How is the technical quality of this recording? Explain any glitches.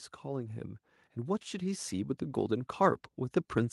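The recording has an automatic gain rising fault. From about 0.22 s to the end, the level climbs steadily. An automatic gain control judged the input too quiet and kept raising its gain, so the background rises together with the speech. That shared, gradual lift sets it apart from compressor pumping, which dips and recovers around loud moments, and from a fade-in, which reaches a fixed level and stops.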